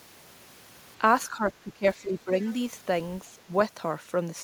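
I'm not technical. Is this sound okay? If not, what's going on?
No, not quite. From about 1.3 to 2.47 seconds the speech keeps sinking and partly breaking up, adding up to well over half a second of lost sound, and there's a much shorter, milder dip around 3.37 to 3.52 seconds. This is speech suppressed in double talk. It's likely that the echo canceller heard both sides talking at once, couldn't tell this voice apart from the echo, and turned it down along with the echo.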